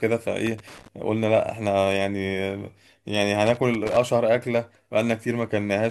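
Loose connector crackle breaks into the speech twice, from 0.47 to 0.88 s and again from 3.47 to 3.97 s. A worn or dirty contact is making and breaking intermittently, chopping the signal into irregular scratchy bursts, with pops where any DC on the line jumps.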